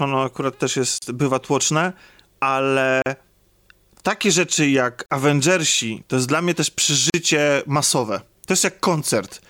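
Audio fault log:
0.98–1.02 s, 3.02–3.06 s, 5.06–5.10 s, 7.10–7.14 s: gap at a join of encoded pieces, 36–40 ms silences every 2 s, the first after "ono akurat też". Each piece's untrimmed encoder delay and last-frame padding remain at the join, and speech resumes where it stopped.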